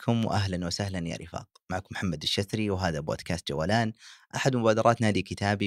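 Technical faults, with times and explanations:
Nothing stood out on listening to this speech recording.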